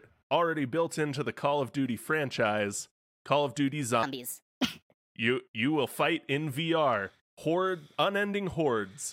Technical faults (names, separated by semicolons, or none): section at the wrong speed